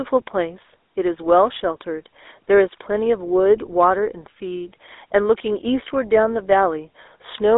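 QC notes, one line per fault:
throughout – GSM full-rate codec: the speech has a plainly audible buzzy, gravelly roughness and a thin, boxed-in tone, held to a telephone band of 300 Hz to 3.7 kHz with nothing above 3.8 kHz. The coder treats the vocal tract as a filter and drives it with a sparse, evenly spaced pulse train, keeping only every third excitation sample. That coarse drive produces the grit, and the sound fits a 13 kbps full-rate coder.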